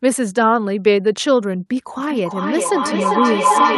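At 1.98 s a feedback howl begins and runs to the end: a microphone-to-loudspeaker loop gaining level each pass, narrowing to a tone around 1 kHz that pulses roughly every 0.4 s and climbs to about 5 dB above the speech.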